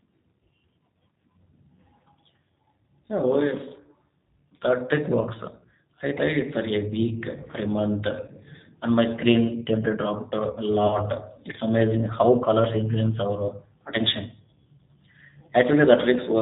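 Throughout the recording, the speech carries G.729 codec damage, and it is plainly audible. At 8 kbit/s the decoder rebuilds each 10 ms frame from a vocal tract filter, a pitch predictor and a few pulses, so the voice sounds rough and slightly synthetic, with nothing above 4 kHz.

VoIP packet loss concealed by the speech codec occurs five times: 6.18–6.22 s, 8.26–8.30 s, 10.87–11.01 s, 13.12–13.14 s and 15.46–15.49 s. The missing audio was 10, 20, 30, 10 and 10 ms respectively. Each time the decoder extended its last pitch and filter at falling gain, producing a brief buzzy tone or coloured noise that fades, and the voice stays weak or distorted for tens of milliseconds or more past each gap while the frame-to-frame prediction recovers.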